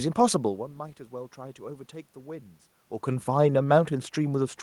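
Nothing has gone wrong with the system here; the room noise belongs to the recording, and the level shifts around half a second and again near three seconds just sound like the talker moving relative to the microphone.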